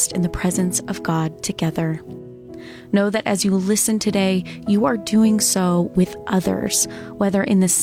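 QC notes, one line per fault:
No faults found on this pass, nothing to log.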